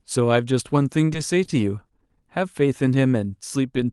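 At 1.45 to 1.50 s and again at 1.86 to 1.91 s, the speech briefly hangs, with a sound held slightly too long and a faint buzz or dip, then resumes intact. These are short stalls from a late packet: the jitter buffer ran dry, and the receiver stretched the last audio for about 30 ms until the packet arrived, losing nothing.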